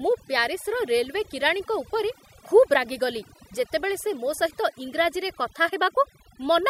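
From start to finish, the background sinks to near silence scattered with twinkling specks: overdone noise removal. A noise reducer set too aggressively is cutting individual frequency bands near its noise estimate, dragging quieter parts of the speech down with them.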